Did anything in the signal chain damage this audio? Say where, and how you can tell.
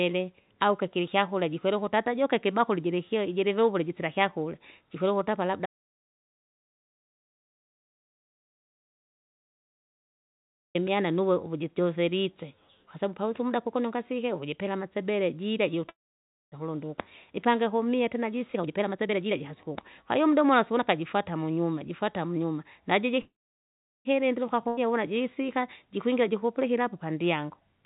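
Yes, several stages left marks. The whole clip sits in a band ending at 4 kHz, which fits a narrowband G.711 mu-law call path at 64 kbps. That band limit is expected for the path, but the following faults are not.

Audio dropout to silence, at the capture, driver or link stage: from 5.66 to 10.75 s the speech stops dead for about 5.1 s and comes back mid-flow. The gap is plain silence with no room tone, which points to the input likely having been lost while the recorder kept writing samples. Unlike a call freeze, there is no decaying buzz before the silence, and whatever was said during the gap never returns.

Call audio freeze, at the network and jitter buffer stage: at 15.89 to 16.55 s and again at 23.21 to 24.08 s, the last sound is stretched into a brief fading buzz and then falls to silence. The silences last about 0.58 s and 0.75 s, within fills of 629 ms and 837 ms. Speech then resumes exactly where it stopped. 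This is likely the jitter buffer running empty while packets were held up. What separates it from a dropout is that nothing is lost; the delay simply grows by the length of the fill.

Jitter buffer speed-up, in the call's playout stage: from 17.91 to 20.99 s the talking runs at 120% speed, hurried but at unchanged pitch, with roughly 0.7 s trimmed out. A milder 107% stretch from 26.09 to 26.64 s removes about 50 ms. The pitch staying put is the tell. The buffer is cutting whole pitch periods to shed backlog, which is different from resampling, where pitch would rise along with tempo.

Skip ahead, at the network or jitter buffer stage: at 24.68 s, just after the second freeze, playback jumps forward. Roughly 0.2 s of speech is missing, bridged by only an 89 ms join, and the delay drops by about 150 ms. Unlike the dropout, there is no silent gap here. The two sides are butted together almost directly, which marks audio being dropped while later audio was already waiting.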